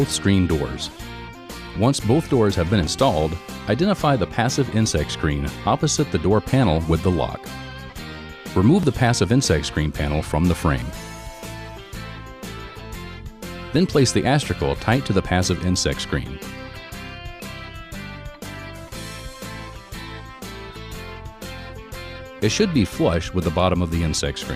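The audio has four tiny skips from overlap between stream segments, at 2.87, 4.86, 8.83 and 12.80 s, removing about 10, 7, 6 and 16 ms respectively. Overlapping timestamps on the 2 s segments lead the player to trim material that was never duplicated, so the sound jumps ahead. On a waveform each point shows an abrupt step where the trace fails to continue; a spectrogram shows a thin vertical broadband line at each time.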